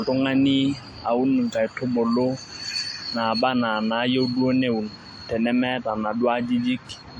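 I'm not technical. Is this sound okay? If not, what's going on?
No. For the whole recording the speech carries a layered, smeary, swirly quality, and the brightest sound is missing above about 17.3 kHz. This is likely transcoding between lossy codecs: the audio was squeezed by one compression format and then squeezed again by another, so each pass adds its own damage on top of the last. What sets it apart from a single round of compression is that two different kinds of roughness are heard together.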